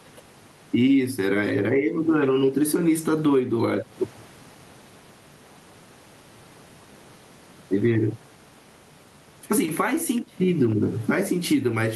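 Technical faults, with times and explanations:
Throughout, gain pumping: gain swings by around 15 dB as loud speech pulls it down, likely overdriven gain hitting a fast limiter.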